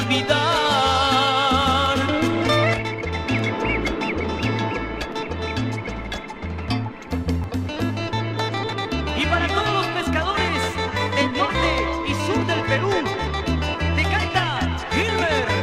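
At 7.44 s and again at 8.7 s the audio jumps forward abruptly, each time with no gap of silence, as if roughly 40 ms of material had been cut out and the two ends butted together. This is most likely a dropped buffer (overrun): the capture side failed to collect a block of samples before the hardware overwrote it, so that stretch was lost and playback resumed from the next block.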